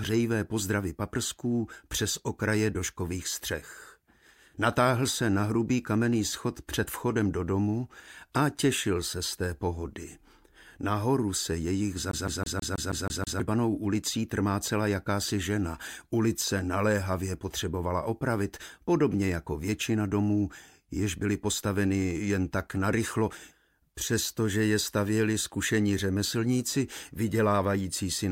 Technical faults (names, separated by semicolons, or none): CD stuck on one turn